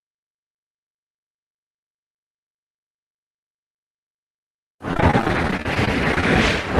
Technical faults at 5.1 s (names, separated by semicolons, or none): repeated packet loss (robotic sound)